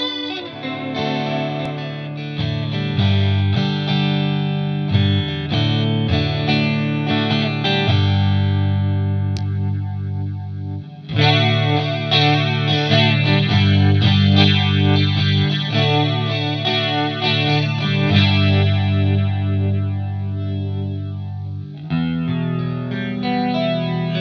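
There are no technical faults to describe at any point in the audio.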